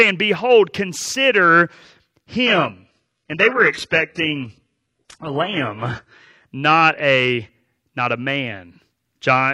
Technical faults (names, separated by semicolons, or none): adaptive stream at a lower bitrate